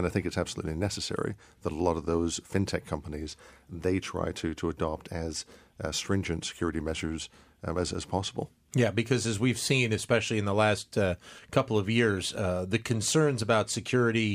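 Nothing here trips up the ear: the speech runs along without a single technical hiccup to point to.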